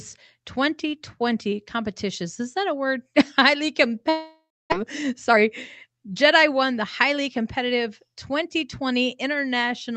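In this speech clip, the sound breaks up at 4.09 s: a fading buzz stretches on for about 0.6 s and gives way to near-silence, and the speech returns at 4.74 s with a piece of it gone. This is most likely a long network dropout. Packets stopped arriving, the receiver concealed the gap by extending the last sound until that wore out, and roughly 400 ms of speech was never played. Right after the gap, from 4.82 to 5.44 s, the talking sounds hurried at an unchanged pitch, running about 14% fast. A gentler speed-up of about 4% follows from 5.86 to 8.32 s. This is jitter buffer speed-up. Delayed audio arrived in a bunch, and the receiver cut short pitch-period slices, around a tenth of a second in each stretch, to bring the delay back down.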